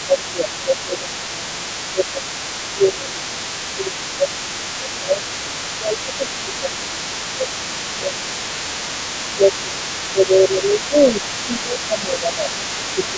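A speech recording from a call in which a second voice runs faintly underneath the whole clip, roughly 15 dB below the main talker, most likely the other side's voice leaking through from loudspeaker echo the canceller left behind. The main voice also dips by about 10 dB in stretches from 0.06 to 8.28 s, 9.35 to 9.77 s, 10.13 to 10.95 s, 11.46 to 12.5 s and 12.95 s to the end. This is likely speech suppressed in double talk, where the canceller attenuates both voices while they overlap.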